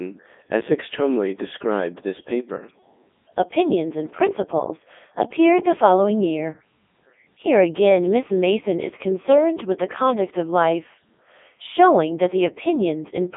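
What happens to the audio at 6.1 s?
At 6.1 s the speech is carried through a Codec 2 vocoder, as it is for the whole clip. The waveform is not preserved. Only pitch, voicing, energy and a rough spectral envelope survive, and the decoder rebuilds the voice from sine waves. The result is robotic and buzzy, with heavy damage. The band runs from 200 Hz to 3.6 kHz, with nothing above 3.8 kHz. That sound fits the highest 3.2 kbit/s mode.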